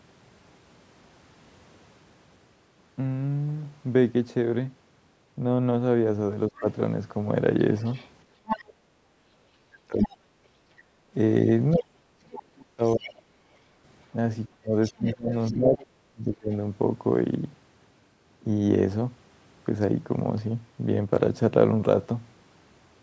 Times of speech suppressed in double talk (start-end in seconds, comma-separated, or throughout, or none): 6.48-6.66, 8.77-16.52